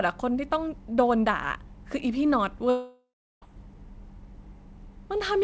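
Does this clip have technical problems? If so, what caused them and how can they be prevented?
Yes. From 2.70 to 3.44 s the speech breaks off in what sounds like a long network dropout, with about 0.72 s of sound missing. The receiver first stretches the last sound into a fading buzzy tail, and the final third of a second or so is silence before speech resumes, with the lost part simply skipped. A short packet-loss glitch would be a brief click or warble; this longer fade into silence points to a likely outage lasting several tenths of a second. The call-path band limit near 8 kHz is heard throughout. Prevention: use a more stable connection, such as wired rather than congested Wi-Fi, and enable redundancy or forward error correction.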